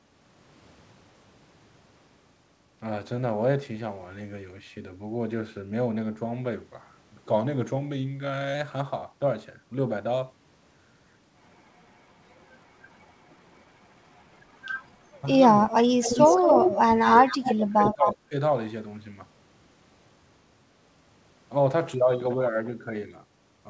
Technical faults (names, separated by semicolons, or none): drift correction step; background gated by the echo canceller; speech suppressed in double talk; echo leak